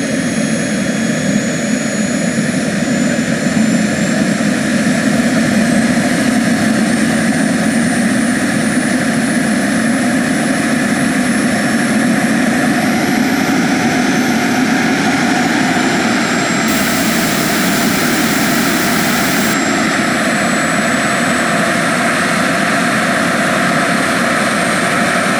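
From 16.68 to 19.53 s the sound turns harsh and grainy, likely low bit depth without dither, roughly 3-bit rounding, with distortion tracking the signal.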